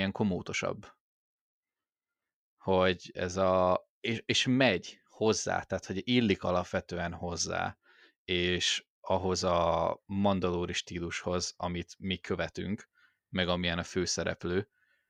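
There are no technical faults to describe in this speech recording.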